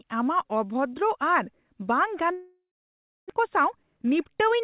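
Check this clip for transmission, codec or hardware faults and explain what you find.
Two transmission faults affect this speech recording, both in its second half. The band limit at 4 kHz, which fits a G.711 mu-law call path at 64 kbps, is the normal character of that route.

From 2.32 to 3.32 s there is a long network dropout. The sound turns into a fading buzz or hiss, then about 0.6 s of silence before the speech resumes with a piece missing. The likely cause is that packets stopped arriving and the receiver's concealment ran out.

From 3.39 to 4.33 s the jitter buffer speed-up is audible: the speech runs about 8% fast at unchanged pitch and sounds hurried. After the gap, late audio piled up in the buffer, and the receiver trimmed roughly 70 ms in short pitch-period slices to catch up.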